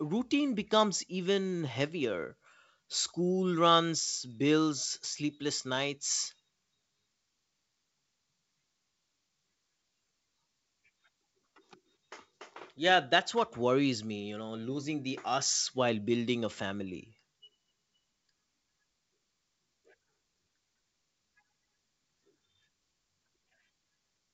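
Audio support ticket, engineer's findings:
Listened through the speech recording over its G.722 wideband telephone path and nothing stood out, so there are no findings to log.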